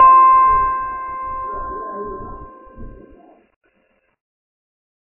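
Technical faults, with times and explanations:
Throughout, channel delay (comb filtering): one side lags by roughly 3 ms, and summed to mono that carves evenly spaced notches starting around 150 Hz, so the music sounds hollow and phasey.
Throughout, MP3 compression: nothing comes through above 2.9 kHz, with watery, swirly smearing on attacks, likely a heavily starved encoder at something like 16 kbps.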